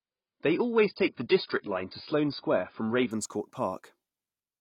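From 0 to 3.11 s the speech plays from an adaptive stream starting at a low bitrate, sounding muffled and smeared, with nothing above 5.1 kHz. The spectrogram shows a flat ceiling there. At 3.11 s quality steps up abruptly without a gap, fitting a switch from roughly 16 to 96 kbit/s AAC.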